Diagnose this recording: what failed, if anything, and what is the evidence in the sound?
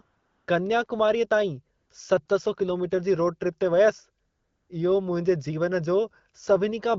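AMR comfort noise (codec stage): speech frames stopped at 0.01–0.47, 1.77–1.89, 2.25–2.27 and 4.25–4.69 s, and smooth synthetic hiss replaced the real background, without packet loss's abrupt dropouts.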